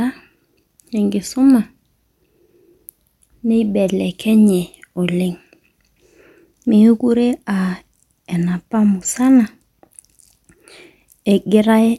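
A speech recording with nothing technically wrong in it. No fault can be heard at any point in the audio.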